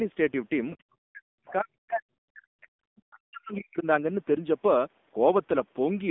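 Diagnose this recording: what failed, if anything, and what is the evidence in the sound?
Codec stage: the speech passes through an AMR narrowband mobile codec, and its heavy buzzy, synthetic texture fits a low rate of about 6.7 kbps. A spectrogram shows a hard ceiling at 3.6 kHz, little below 200 Hz, and smeared, pulse-driven harmonics.

Call processing stage: from 1.47 to 1.52 s, a brief scrap of the other side's voice leaking through appears, roughly 25 dB below the talker. The likely cause is the echo canceller leaving loudspeaker residue. A spectrogram shows a faint, short smudge of foreign harmonics.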